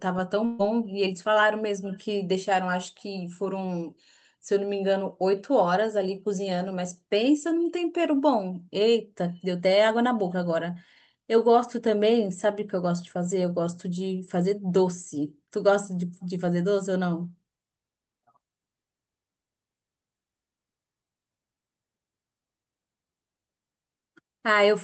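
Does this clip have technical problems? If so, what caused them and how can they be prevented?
Yes. Between 0.45 and 0.61 s, a burst of packet loss dropped about 140 ms of the call stream. The receiver extended the last sound and faded it for about 136 ms, which is heard as a brief held buzz or hiss. The speech then jumps ahead with that part missing. Enabling Opus in-band forward error correction or using a steadier network link would prevent it.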